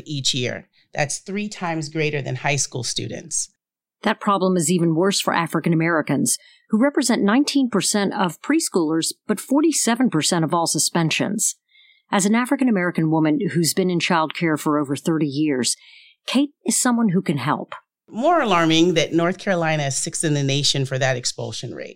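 No technical faults can be heard anywhere in this speech recording. There is nothing to place on a timeline, so no events are listed here.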